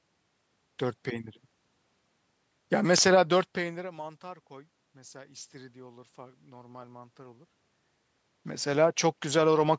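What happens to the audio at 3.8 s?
Nothing goes wrong at 3.8 s; the audio is intact there.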